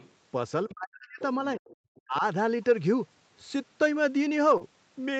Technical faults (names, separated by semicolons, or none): other side's voice leaking through; speech suppressed in double talk; short concealed packet loss